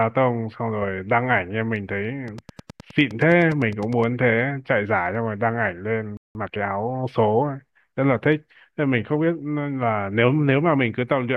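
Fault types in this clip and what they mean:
Train of clicks: A nearby device or a struggling interface likely injects a repeated pulse. From 2.28 to 4.04 s, about twenty same-shaped clicks tick regularly at roughly 9.7 per second, peaking about 5 dB above the speech and sounding over pauses as well.
Playback stall: The player likely ran short of data or had its thread held up, so output halted until it could resume. At 6.17 s the speech cuts off mid-flow into about 180 ms of silence, then carries on from where it stopped.
Time-compressed catch-up: To clear the backlog left by the stall, the player removes small slices and cross-fades the remaining pieces. From 6.35 to 6.69 s the speech runs at about 1.5 times normal speed, rushed but at its usual pitch.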